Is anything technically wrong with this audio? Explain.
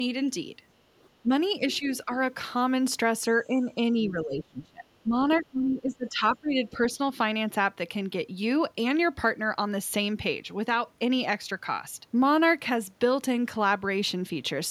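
Yes. The other side's voice leaking through appears faintly at 0.99–1.07 s and 2.12–2.16 s, about 35 dB and 25 dB below the speech. These are brief scraps, likely residual loudspeaker echo the canceller missed.

Speech is suppressed in double talk at 1.22–1.30, 1.79–1.89, 2.05–2.10, 3.47–3.78, 4.02–5.14 and 5.40–6.79 s. The voice dips by roughly 5 to 30 dB, deepest around 4–5 s, likely because the canceller ducked everything while both sides spoke.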